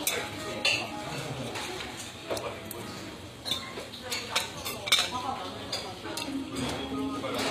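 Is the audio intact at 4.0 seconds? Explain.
No. At 4.0 seconds, as throughout the clip, the audio carries plainly audible damage that is likely from HE-AAC compression at a low bitrate, around 24 kbps. The encoder keeps only the lower spectrum and fakes the treble by copying lower bands upward under a coarse envelope. The top end is rebuilt and its harmonics no longer line up with those below, so high detail sounds gritty and metallic, and nothing remains above 15.5 kHz.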